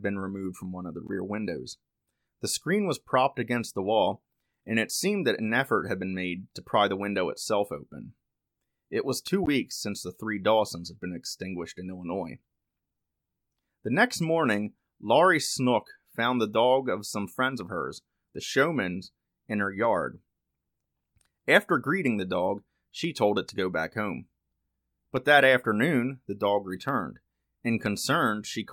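It's a speech recording with two short corrupt frame decoded glitches and one loud pop. The first glitch, at 1.07 to 1.10 s, is a brief chirpy blip about as long as a single damaged frame, peaking roughly 25 dB below full scale. The second, at 9.43 to 9.48 s, runs a bit longer, which points to two frames in a row, and is a touch louder, around -20 dBFS. In both cases flipped bits in the compressed data got decoded anyway, so misread gains and codes dumped energy at the wrong frequencies until clean frames resumed. Then at 19.84 to 19.87 s there's a single sharp loud pop sitting on top of the speech, which carries on underneath it. It peaks a few dB above the speech itself. That's a quick voltage step or pulse hitting the signal chain, likely a switch, connector or static discharge, with the downstream circuitry shaping it into that short thump.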